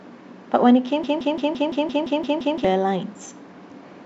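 A broken-record loop from 1.04 to 2.65 s repeats one 0.17 s slice of speech nine times, likely from a stalled player resending its last fragment.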